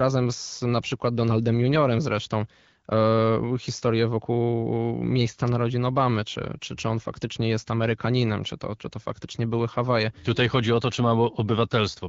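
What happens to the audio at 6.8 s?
Nothing goes wrong at 6.8 s: the speech carries on intact through that moment, with only the light, even coloration of the AMR wideband (HD Voice) codec that runs under the whole recording.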